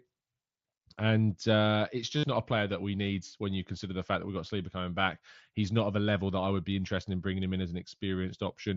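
From 2.17 to 2.23 s, between "uh it's" and "not a player that", concealed Bluetooth headset packet loss occurs: about 60 ms of voice packets from the headset never reached the phone, a gap consistent with a run of several consecutive frames. The receiver filled it by repeating the best-matching slice of the preceding waveform, so the gap becomes a buzzy tone held at full level, followed by a brief warble as real audio resumes over the mSBC wideband link.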